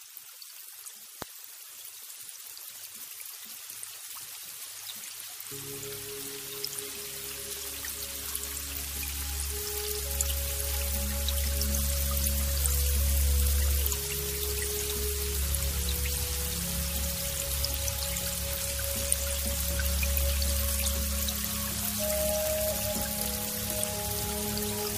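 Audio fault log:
1.22–1.24 s and 23.25–23.27 s, loud pop: a single sharp pop sits on top of the sound at each point, peaking roughly 15 dB above the surrounding level at the first and roughly 10 dB above it at the second. The sound carries on unbroken underneath. Each pop lasts about 20 ms. An abrupt voltage pulse, likely from a plug, switch, static discharge or driver glitch, is added to the signal, and the downstream circuitry smooths it into a brief percussive click.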